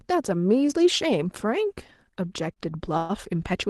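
A speech recording carried over a call link, with the upper band rolling off around 12 kHz as the Opus call codec does at this setting, has two timing faults. From 2.53 to 2.58 s there is a short stall from a late packet. A packet missed its playout slot, so the jitter buffer ran dry and the receiver stretched the last sound for about 27 ms until the data arrived. The speech then resumes at the same point with nothing lost, leaving a briefly held sound with a slight buzz or dip. From 2.97 to 3.11 s a longer call audio freeze occurs. The sound is held and continued as a fading buzz or hiss for about 121 ms without dropping to silence, then picks up exactly where it stopped, so the speech is delayed rather than cut. The likely cause is packets held up in transit until the jitter buffer emptied.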